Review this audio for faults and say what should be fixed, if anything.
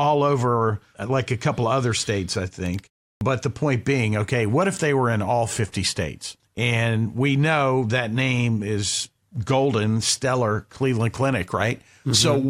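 Clipped start after a pause, 3.17 to 3.21 s: the output device dozed during the 0.37 s gap after "other states I think" and woke late, swallowing 41 ms, so "the point being okay" starts abruptly. Keep the output stream open through silences, or disable the device's idle power-saving, so it never has to wake before a sound.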